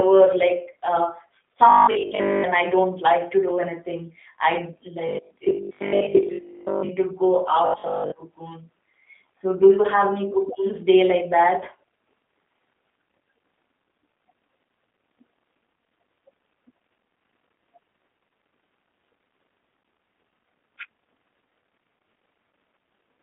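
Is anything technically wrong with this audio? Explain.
Yes. Throughout, the speech passes through the G.729 codec at 8 kbit/s, rebuilt from a coarse model and confined to about 250 Hz to 3.6 kHz, so it sounds rough, synthetic and muffled.

From 1.69 to 2.45 s, 5.09 to 6.93 s and 7.66 to 8.12 s there is robotic sound from repeated short buffers. Audio likely arrived too late, so a 20 ms chunk was looped over most of the real signal, imposing a rigid, metallic 50 Hz buzz.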